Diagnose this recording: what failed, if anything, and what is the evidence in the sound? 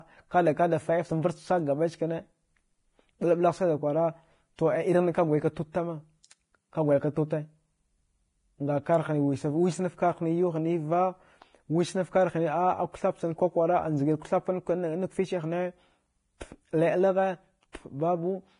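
The failure sits at the codec stage: heavy lossy compression, likely Vorbis compression, runs through the whole speech recording. Nothing survives above 10.5 kHz, so a spectrogram shows a flat ceiling there. Below it, the treble breaks into speckled, noise-like patches instead of clean harmonic lines. Consonants turn hissy and grainy and vowels sound roughened, because the fine detail was quantised away and replaced by noise of similar energy. That degree of damage fits a low bitrate of around 29 kbps.

Pre-echo appears at 17.72 s, where a hiss runs for about 16 ms ahead of a sharp onset and the attack itself sounds smeared. On the waveform, low-level fuzz rises just before the transient. On the spectrogram, a broadband smudge leads the attack's vertical edge. The codec spreads quantisation noise across an entire transform block, so noise sized for the loud onset also fills the quiet stretch before it within that block.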